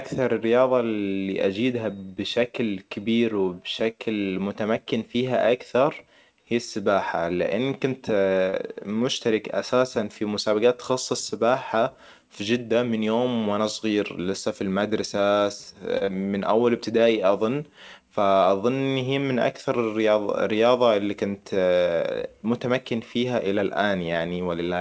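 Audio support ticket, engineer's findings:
Short stall from a late packet at 8.50 s and 15.97 s. Jitter buffer ran dry. Receiver held the last sound about 30 ms each, then resumed in place. Nothing lost. Brief drag with a slight buzz or dip, the second just after "صغير لسا في المدرسة".

Short concealed packet loss at 16.05 s, right after that stall. About 20 ms never decoded in time. Receiver extended the preceding sound for about 27 ms, then crossfaded back. Brief smear. A short sound there may drop out.

Jitter buffer speed-up, 12.73 to 13.07 s, between "مسابقات تخصص سباحة في" and "وانا صغير لسا في". Buffer overfull, so pitch-period slices were trimmed, about 40 ms in all. Plays 11% fast at unchanged pitch and sounds hurried. Second pass 22.56 to 23.25 s, 6% fast, about 50 ms removed.

The call path carries wideband codec coding noise, with nothing above 8 kHz, which fits G.722 at 64 kbps.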